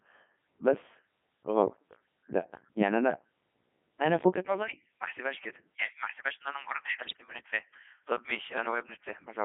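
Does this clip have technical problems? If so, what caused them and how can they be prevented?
Yes. The whole clip runs through a Codec 2 vocoder at 3.2 kbit/s. It sends only pitch, voicing, energy and envelope, then rebuilds the speech from sine waves, so everything sounds robotic and buzzy, confined to roughly 150 Hz to 3.5 kHz. To prevent it, use a waveform codec or a higher-rate link.

From 7.00 to 7.21 s you get bit errors on digital voice radio. Flipped bits, something like one in twenty, corrupt the vocoder's frame parameters, so pitch, level and tone jump into warbly gibberish across what sounds like about eight frames. Better signal margin or stronger error protection would avoid it.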